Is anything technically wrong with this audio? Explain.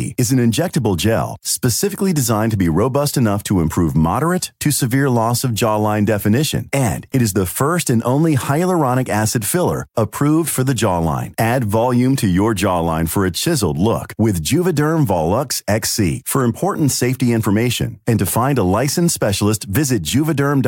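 No technical faults are audible.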